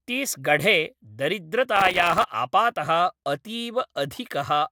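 From 1.76 to 2.24 s the speech breaks into processor overload crackle. The system repeatedly missed deadlines on very short buffers, around a millisecond and a half each, leaving dozens of hard-edged silent gaps. The result is a gritty tearing. The waveform shows rapid notches of near-silence, and the spectrogram shows dense vertical broadband streaks.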